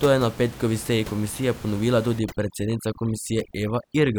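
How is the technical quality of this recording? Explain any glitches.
The recording has one clear glitch, overdone noise removal, starting at 2.19 s just after "petkovi seji komisije ponovila" and lasting to the end. Before that, room noise sits about 17 dB below the speech. From 2.19 s a noise reducer is set too hard. Any frequency band near its noise estimate gets pushed down or switched off, and quiet parts of the speech vanish with it. The background drops and breaks up into twinkling specks.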